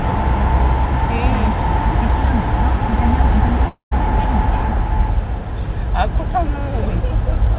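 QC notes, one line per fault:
3.68–3.93 s, long network dropout: the sound gives way to a buzzy continuation of its last moment that fades into about 0.14 s of near silence, then the audio resumes with roughly a quarter second missing, most likely from packets lost on the call path. On a spectrogram the final spectrum smears into fading horizontal streaks, then a dark gap, all below the 4 kHz ceiling that fits a G.711 A-law call. The waveform shows a decaying envelope, a flat stretch, then an abrupt restart.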